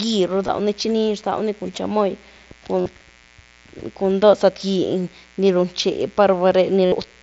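It's a speech clip with a steady mains buzz running under it the whole way through. It's a raspy 60 Hz buzz sitting roughly 30 dB below the speech. That rasp comes from sharp switching spikes, probably from a dimmer, a rectifier or a missing shield, landing twice per mains cycle and spraying harmonics up into the kilohertz range rather than giving a clean hum. The other problem is concealed Bluetooth headset packet loss. The headset-to-phone link dropped audio and the receiver papered over each gap by repeating a best-matching slice of what it had just played. The short losses at 0.47 s and 4.72 s last about 15 ms each. Around 2.80 to 2.86 s the losses are scattered over about 60 ms, with the longest run near 45 ms. From 6.85 to 6.92 s there's a solid gap of about 68 ms. In those longer stretches the speech turns into a held, buzzy tone at full level, then warbles slightly as the real signal comes back. 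The mSBC wideband link underneath is working as it should, with speech carried up to 8 kHz.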